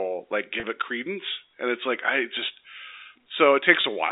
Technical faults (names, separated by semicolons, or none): packet loss with pitch repetition